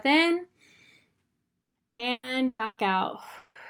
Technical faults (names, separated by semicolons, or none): repeated packet loss (robotic sound); long network dropout